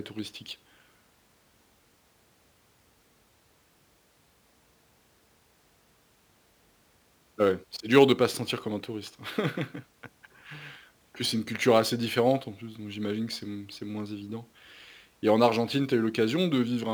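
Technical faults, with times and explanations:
Throughout, crude rate conversion: samples appear to be dropped or repeated rather than filtered, which fits a 48 kHz to 44.1 kHz change. The recurring timing error, around 30 dB below the speech, creates shifted inharmonic copies heard as a gritty fizz.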